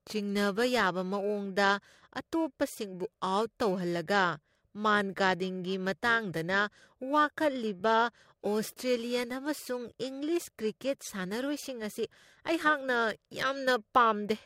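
Speech, affected throughout by periodic clock jitter: interference is modulating the converter's sampling clock at a rate of around 2 kHz, placing sidebands at that spacing on either side of every component. The result is a rough, metallic edge, strongest on higher-frequency content, that disappears whenever the audio falls silent.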